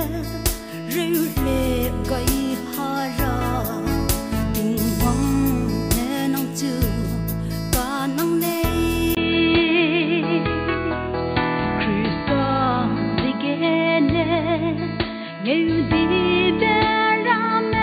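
At 9.15 s, after a 20 ms gap, the audio turns dull and boxy and stays that way to the end, with nothing above 4.6 kHz. The loudness stays about the same, but a new, faint background noise appears, around 45 dB below the signal. The likely cause is an input switched to a poorer device partway through recording, with a narrower-band microphone or headset path taking over and bringing its own tone and noise floor.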